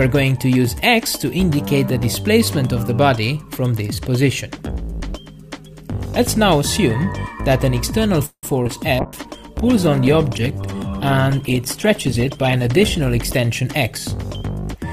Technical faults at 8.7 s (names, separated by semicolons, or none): short concealed packet loss